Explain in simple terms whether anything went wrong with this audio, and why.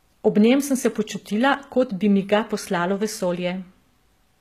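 Yes, the speech is damaged the whole way through, from start to finish, and it is easy to hear. The s sounds come out gritty, metallic or lispy, and nothing reaches above about 14.9 kHz. The likely cause is HE-AAC compression, which keeps only the lower sounds and fakes the treble by copying lower sounds upward. That sets it apart from a simple muffled recording: the treble is still there, but it's a rough imitation, not the real thing.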